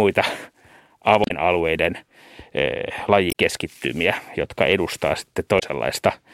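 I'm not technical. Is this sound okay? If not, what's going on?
No. There are three short glitches in this speech, at 1.22 to 1.31 s, 3.28 to 3.33 s and 5.56 to 5.63 s. They come from damaged data in a compressed stream. Some of the stored audio was corrupted, so the player briefly loses track and produces a blip.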